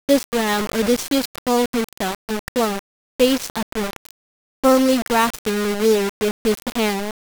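From start to end, the speech carries harsh, grainy distortion that tracks its level. Quiet stretches sputter or drop out. This is likely low bit depth without dither: roughly 4 bits, rounded. The error sits only about 10 dB below the signal.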